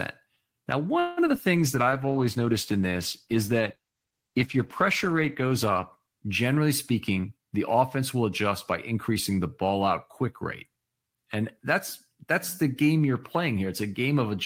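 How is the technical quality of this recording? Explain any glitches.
The recording has four distinct network-related glitches, all packed into the first eight and a half seconds or so.

From 0.99 to 1.38 s there's repeated packet loss, which gives that robotic sound. Four gaps hit in quick succession, the longest 177 ms. The receiver papered over them by stretching out the last bit of sound it had, about 186 ms of fill in total, and another 81 ms simply dropped out. Nearly half that stretch is patched rather than real, so the speech comes across choppy, with chunks missing.

Right after, from 1.57 to 6.69 s, you get a call bitrate drop. The connection's bandwidth estimate fell, and the encoder was pushed from 40 kbps down to 14 kbps, sitting at the bottom for roughly four seconds. At that rate the codec quantises much more coarsely, so the speech loses its clarity and takes on a rough, watery, dulled quality until the bitrate climbs back.

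Overlapping that, from 1.82 to 2.25 s, there's a jitter buffer slow-down. The receiver's buffer was running short, so it padded things out by repeating tiny slices of the waveform over and over, adding 68 ms in all. Playback drops to 86% speed while the pitch stays put, so the speech sounds drawn out through that patch.

Then from 6.90 to 8.51 s it goes the other way with a jitter buffer speed-up. Too much audio had piled up in the buffer, so the receiver trimmed out short pitch-period-sized pieces repeatedly, cutting around 150 ms. Playback runs at 109% with unchanged pitch, so the speech there feels a bit rushed and clipped along.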